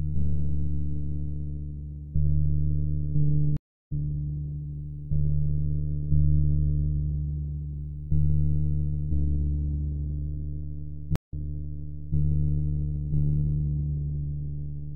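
A stream reconnect at 3.57 s cuts the sound to silence for 326 ms. The connection dropped, and the player rejoined with a fresh decoder. Playback resumes roughly 0.4 s further on, so a short stretch is skipped. A second stream reconnect at 11.16 s leaves a 151 ms gap, but here the server resent a burst. The sound picks up 862 ms earlier than where it broke off, so that stretch plays twice before continuing.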